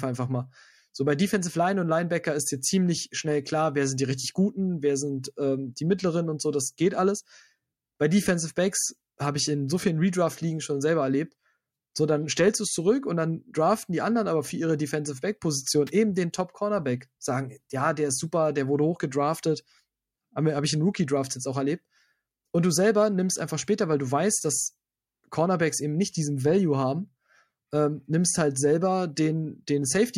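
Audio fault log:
5.22 s and 29.15 s, pre-echo: the codec kept a long transform block, which fits a window of about 26 ms, and did not switch to short blocks for either sharp attack. Quantisation noise scaled to the loud onset was spread back across the quiet stretch before it, so each attack is preceded by a hiss about 13 dB above the background, lasting roughly 17 ms, and the onset itself sounds softened and smeared.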